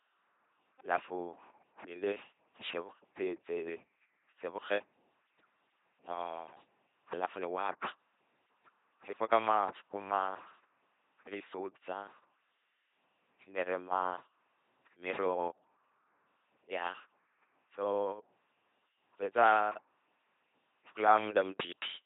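From start to finish the speech carries the sound of an LPC-10 vocoder, coding at 2.4 kbit/s with heavy damage. Each short frame is rebuilt by a ten-pole filter fed with either a buzzing pulse train or hiss, never a mix, so the voice turns mechanical and robotic. On a spectrogram, voiced stretches show rigid, evenly spaced harmonics with smeared formants, unvoiced stretches show flat noise, and nothing appears above 3.8 kHz.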